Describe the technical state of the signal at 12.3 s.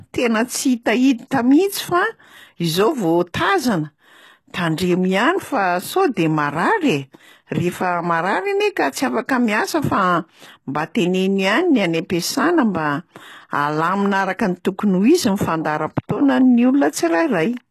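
At 12.3 s the speech carries HE-AAC compression damage, as it does throughout. Treble is likely rebuilt by spectral band replication, which suits a bitrate near 16 kbps. Nothing sounds above 12.3 kHz, and s sounds come out gritty and metallic.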